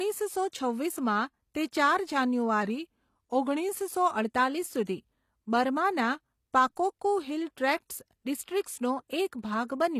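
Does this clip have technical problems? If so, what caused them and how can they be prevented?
Yes. Throughout the speech, the top end stops dead at 14.9 kHz, and the sibilants sound gritty and metallic, which points to HE-AAC compression at a low bitrate, around 24 kbps. The likely cause is spectral band replication: the encoder codes only the lower band and fakes the treble by copying lower bands upward under a coarse envelope, so the rebuilt harmonics don't line up with the real ones. Ordinary low-pass filtering would sound dull rather than bright and grainy. Encoding at a higher bitrate with plain AAC or Opus avoids it.

From 2.63 to 3.69 s the speech slows by 5.75% and drops about a semitone (103 cents), then snaps back to normal. This is likely a drift correction step: clock-matching software changed the playback rate in one jump to rebalance its buffer, so speed and pitch moved together. 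Unlike a gradual wow or a pitch-shift effect, it has sharp onset and release edges and holds a fixed offset in between. Smooth, continuous resampling in the clock-matching stage, or a shared clock, prevents it.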